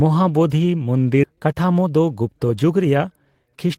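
At 1.23 s the speech jumps forward in a skip ahead. Roughly 0.7 s of audio never plays, and the two sides are spliced with no gap. A spectrogram shows an abrupt seam where formant tracks and harmonics break and restart mid-pattern, and the waveform envelope changes shape at once.

From 1.29 s to 3.77 s a jitter buffer speed-up drains the excess delay. Short pitch-period chunks are cut out again and again, about 0.3 s in total, so the speech runs at 113% speed with unchanged pitch and sounds hurried. Harmonic spacing stays constant on a spectrogram while syllables are compressed in time, and the waveform shows shortened voiced stretches.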